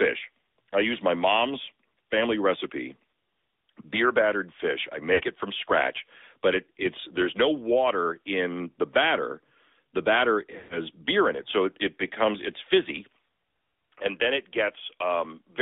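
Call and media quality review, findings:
AMR narrowband mobile codec, throughout. Band limited to about 300 Hz to 3.6 kHz. Buzzy, synthetic texture, plainly audible. The pulse-driven vocal tract model is coarse at this rate, which fits the 10.2 kbps AMR-NB mode. Nothing survives above the line band.

Lost AMR speech frames at 5.14 to 5.21 s and 10.58 to 10.79 s. Brief warble at the first, about 60 ms, consistent with three 20 ms frames. Smeared, fading sound at the second, about 120 ms, consistent with six frames. The decoder repeats the last good parameters with decaying gain.

Input switched to a poorer device, 13.28 s to the end. Sound turns duller and boxier, with nothing above 3.4 kHz. Level drops a few dB. A faint new noise floor sits far below the signal. No gap at the change. The likely cause is a switch to a narrower-band microphone path.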